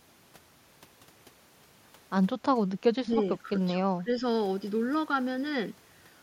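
Speech suppressed in double talk at 3.03 to 3.54 s and again at 3.97 to 4.10 s: the speech dips sharply, by roughly 15 dB, then by about 10 dB. This is likely an echo canceller failing to separate this side's talk from the simultaneous far-end echo and attenuating both.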